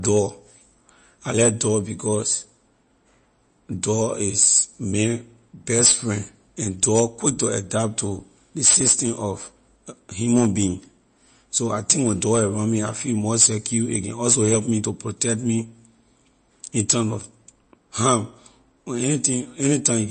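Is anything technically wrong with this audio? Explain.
Yes. Throughout the speech there is no content above 8.3 kHz, and the remaining audio has a watery, swirling texture with smeared consonant onsets and metallic chirps on s sounds. This is likely MP3 compression at a low bitrate, consistent with roughly 35 kbps. Short of bits, the encoder cuts the treble at a fixed frequency and discards weak spectral lines, which then appear and vanish from frame to frame, producing the swirl and chirps.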